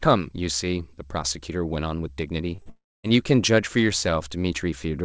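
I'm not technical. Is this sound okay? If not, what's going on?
No. Around 2.56 seconds the speech briefly smears and wobbles, and again at 2.62 to 2.68 seconds. These are short concealed packet losses. On a call, the audio travels in small pieces. Here two pieces, about 20 and 40 thousandths of a second long, arrived too late. The receiving end patched each gap by stretching the sound just before it, so a tiny bit of speech is missing.

Right after that, from 2.70 to 3.05 seconds, the speech turns into a fading buzz or hiss and then goes quiet for roughly a quarter of a second. When it comes back, a third of a second of speech is gone. This sounds like a long network dropout, most likely a moment when the connection stalled and nothing got through. The receiver kept the last sound going briefly, then gave up and left near-silence until the audio resumed. Separately, the call connection itself cuts off the very highest tones above about 8 kHz.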